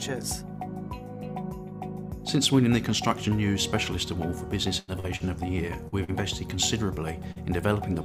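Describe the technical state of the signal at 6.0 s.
Around 6.0 s, two short concealed packet losses hit the stream: about 40 ms of audio failed to reach the decoder in time from 5.88 to 5.95 s, and again from 6.04 to 6.11 s. Each time the receiver patched the gap by extending the preceding sound, as a pitch continuation or shaped noise, then crossfaded back into the real signal. Both show up as a brief smear or wobble.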